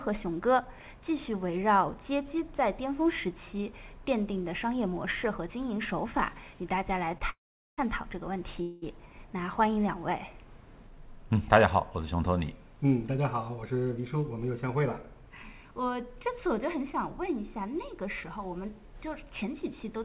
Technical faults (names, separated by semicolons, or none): short stall from a late packet; call audio freeze; jitter buffer speed-up